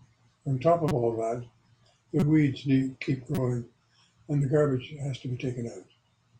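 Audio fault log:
0.88–0.92 s (just before "all that"), 2.20–2.23 s, 3.35–3.38 s: corrupt frame decoded. Each damaged frame plays with energy at the wrong frequencies, heard as a short chirp, squeak, blip or burst of noise.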